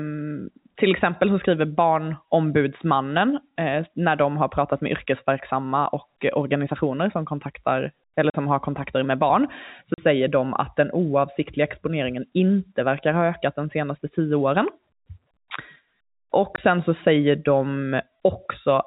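At 8.30 to 8.34 s, 9.94 to 9.98 s and 16.56 to 16.58 s the speech drops out completely: packet loss filled with silence. The first two holes last 40 ms and the last 20 ms, lengths that fit lost 20 ms packets replaced by silence. Unlike a concealed loss, which smears or repeats the preceding sound, these gaps are dead silent with abrupt edges, cutting through the narrowband telephone sound of the G.711 line.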